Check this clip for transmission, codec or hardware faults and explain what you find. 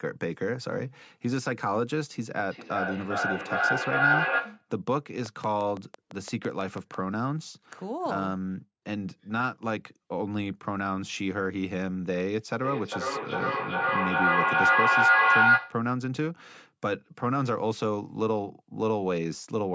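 Two kinds of fault are present: feedback howl, heard twice, and a train of clicks.

Feedback howl runs from 2.5 to 4.71 s and again from 12.64 to 15.88 s. A microphone-to-loudspeaker loop gains level on each pass, narrowing to a tone of roughly 1.5 kHz that pulses about every 400 ms. It peaks about 5 dB above the speech the first time and about 8 dB above it the second.

A train of clicks runs from 5.26 to 6.95 s: roughly ten near-identical pulses at a regular rate of about 6 per second, peaking around 10 dB above the signal. They tick over the speech and the gaps alike, likely from electrical interference or a faulty connection or power supply.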